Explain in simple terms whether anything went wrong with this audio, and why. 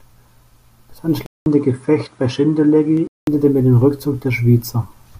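Two things go wrong. From 1.26 to 3.27 s the speech turns duller, with nothing above 10.5 kHz and a faint new background hiss, after a brief silence of about 0.2 s. It is an input switched to a poorer device, likely another microphone. Loudness stays about the same, so the change is in tone, not volume.

At 2.97 s there is a tiny skip, a sliver of audio shorter than a hundredth of a second. This is audio missing between chunks, likely where the recorder moves from one 2-second block to the next. Unlike the device switch, the tone doesn't change; the sound just jumps.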